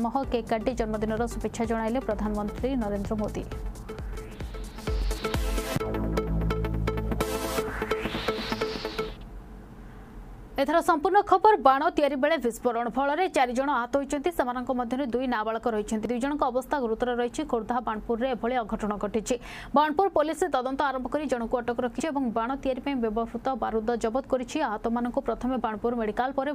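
At 4.15, 10.10, 16.05 and 22.00 s the sound jumps forward, with roughly 50 ms gone each time. The regular spacing likely points to audio missing between chunks of about 6 s. The waveform shows abrupt seams with no silence, and the spectrogram shows sharp vertical discontinuities.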